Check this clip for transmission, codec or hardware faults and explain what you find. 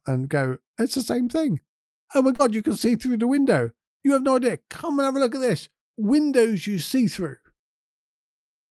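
Two kinds of packet-loss damage sit between 2.35 and 3.08 s of this speech, carried over an Opus call path whose coding runs to about 12 kHz.

Short concealed packet loss, 2.35 to 2.41 s, just before "you can": about 40 ms never arrived, and the decoder extended the preceding sound to fill it, leaving a brief smear.

Lost packets rebuilt from error correction, at 2.39 to 2.41, 2.59 to 2.61, 2.79 to 2.90 and 3.06 to 3.08 s, the last just before "the window": each 20 ms frame came from a low-bitrate backup copy carried in the following packet, so these spots sound rougher and noisier without any gap.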